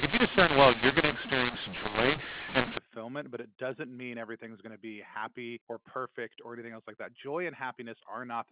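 Telephone-band speech that opens with a mu-law and A-law mix-up, running from the very start to about 2.78 s. The audio was coded with mu-law but decoded as A-law, so the companding curves disagree: loud and soft levels come out scrambled, the sound turns harsh and gritty, and gaps fill with hiss because near-silent samples get pushed well up. After that the G.711 coding decodes cleanly, with the top end stopping near 4 kHz, which fits 8 kHz telephone sampling.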